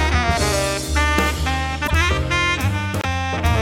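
The audio jumps forward twice, at 1.86 to 1.91 s and at 3.01 to 3.05 s. Each jump leaves a brief chirp, a burst of noise or a short hole lasting about two frames. The likely cause is a broken MP3 bit reservoir. Frames were lost, and the frames after each cut reached back for borrowed data that was no longer there. The lengths of the damage fit 24 ms frames.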